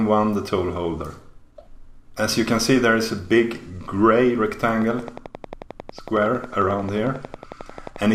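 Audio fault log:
4.82–8.06 s, train of clicks: Something in the chain is injecting a short pulse at a steady 11.1 per second, most likely interference from nearby equipment or a faulty connection or power supply. The result is about forty near-identical clicks ticking in an even rhythm. They peak roughly 5 dB above the surrounding sound, so they stand out as a distinct popping layer on top of it and carry on through the quieter moments.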